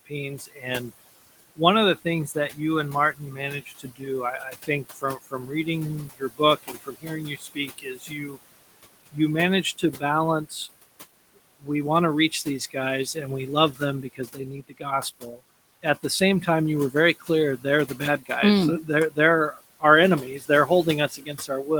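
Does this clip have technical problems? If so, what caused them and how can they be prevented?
Yes. Noise suppressor artifacts are present throughout the clip. The suppressor pulls down bands it judges to be steady noise by about 19 dB, frame by frame, so the room noise, which sits about 16 dB below the speech, drops away in the gaps and returns under the speech. Prevention: lower the suppression depth, or cut the room noise at the source so less suppression is needed.

Speech cut by the noise suppressor occurs at 0.05–0.91 s (about 19 dB), 1.56–2.58 s (about 16 dB), 3.13–8.38 s (about 21 dB, roughly two seconds affected in total), 9.12–10.68 s (about 14 dB), 11.6–11.69 s just before "want to" (about 17 dB), 12.31–13.16 s between "want to" and "and we" (about 12 dB), and from 13.72 s after "and we" to the end (about 21 dB). Quiet consonants and word endings are classified as noise and attenuated with the background, so they sound swallowed or faint. 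Prevention: use a gentler or speech-aware suppressor with slower gain changes, and raise the speech level relative to the noise at the microphone.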